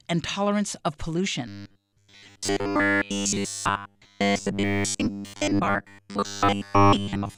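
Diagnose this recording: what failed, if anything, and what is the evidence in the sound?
From 1.48 s, right after "and tolerance of", to the end, the speech turns into robotic sound from repeated short buffers, a rigid metallic buzz at 100 Hz. That's likely a buffer underrun, looping roughly 10 ms chunks for most of that stretch.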